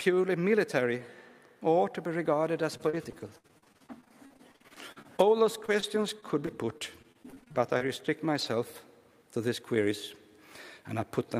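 From 2.57 to 8.46 s, repeated packet loss (robotic sound) sets in: data keeps going missing, and dozens of gaps up to 59 ms are patched by stretching the preceding audio, about a second in all. The sound turns choppy, with fragments dropping out.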